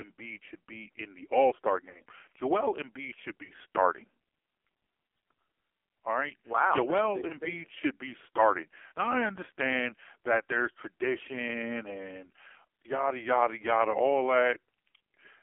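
Throughout, the speech passes through an AMR narrowband mobile codec at a very low bit rate, one that fits the 5.9 kbps mode, confined to a 300 Hz to 3.4 kHz line band. The heavy codec damage leaves the voice muffled, buzzy and synthetic.

Lost AMR speech frames cause four dropouts, where the decoder patched over corrupted frames by repeating the last good settings at falling gain. These produce brief dips and warbles at 1.90 to 2.01 s, 3.44 to 3.51 s, 7.28 to 7.33 s just before "thing should be starting", and 8.88 to 8.92 s right after "thing should be starting".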